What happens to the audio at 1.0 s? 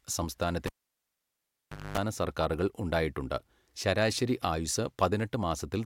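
At 1.0 s the cable has been pulled and plugged in again. A pop at 0.66 s, near silence, a 50 Hz mains buzz, then a pop at 1.98 s.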